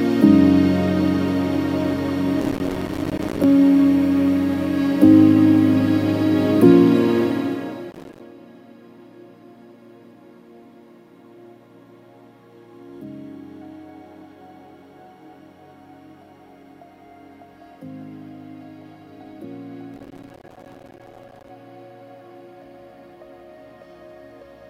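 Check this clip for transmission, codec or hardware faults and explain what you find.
Processor overload crackle occurs three times, from 2.4 to 3.44 s, 7.91 to 8.20 s and 19.94 to 21.49 s. The processor repeatedly misses buffer deadlines, which fits buffers of around 5 ms, and each miss drops a hard-edged sliver of silence. Dozens to over a hundred in quick succession produce gritty tearing crackle over the sound.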